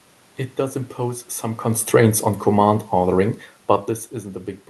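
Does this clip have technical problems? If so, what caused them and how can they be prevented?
Yes. Right after "does impose some", automatic gain falling runs from 1.65 to 3.39 s, as the gain control judges the input too hot or its background noise too strong and eases it down by about 3 dB. Unlike a talker leaning back, the room noise sinks along with the speech. Setting a lower input level so the AGC has no reason to pull back would prevent it.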